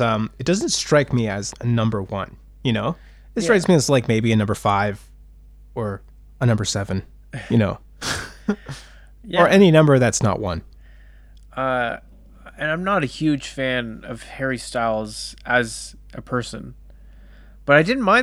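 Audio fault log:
throughout: mains hum, a steady low tone at 50 Hz with some low harmonics, sitting about 25 dB below the speech, where a ground loop or a nearby transformer lets the power line couple into the signal, so it stays audible beneath every pause.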